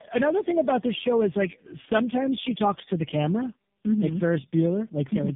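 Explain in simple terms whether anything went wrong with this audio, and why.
The speech went through tandem speech coding: three phone codecs in a row, each re-squeezing the last one's output, so it sounds rough, muffled and warbly, with nothing above 3.7 kHz.

There's also a regular click about every 0.92 seconds, from 0.66 to 5.28 s. That's likely clock drift buffer slips, where two devices' clocks disagree and tiny chunks get dropped or repeated.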